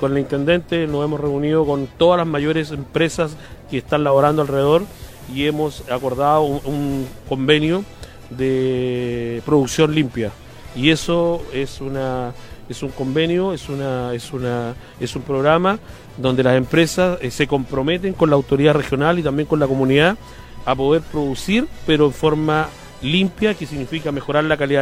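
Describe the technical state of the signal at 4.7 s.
At 4.7 s the signal is in a digital radio blend to analogue, running from 4.03 to 7.26 s. The receiver lost its digital stream and cross-faded over about 184 ms to the station's FM broadcast, so a steady hiss rises to roughly 30 dB below the programme, with no change in level. Unlike a plain bandwidth drop, the hiss arrives with the cross-fade and clears when the digital signal returns.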